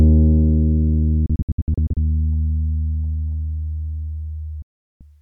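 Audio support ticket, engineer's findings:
Audio chops into short silent holes from 1.26 to 1.97 s, about 350 ms lost over roughly 700 ms, longest hole 64 ms, each with a 3 ms fade. Digital broadcast dropout: receiver muting on failed frames. Hole sizes fit 32 ms frames.

Single clean mute from 4.62 to 5.01 s, about 380 ms gone, 3 ms fade, audio resumes later. Same digital broadcast dropout. Receiver muted until valid frames returned, and that material is lost.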